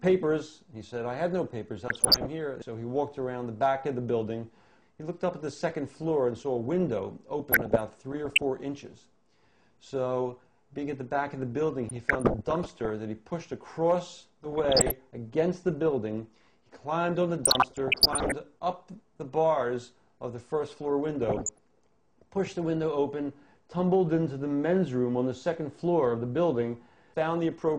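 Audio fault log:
1.87–2.26, 7.52–8.44, 11.89–12.90, 14.43–14.91, 17.43–18.37 and 21.22–21.60 s: DAB burbling. Weak reception lets bit errors of around 0.5 to 1.5 percent corrupt MP2 scale factors and samples, so individual sub-bands jump in level for a frame at a time. The result is short blips of noise in single sub-bands that show on a spectrogram as scattered short rectangular bursts confined to narrow bands.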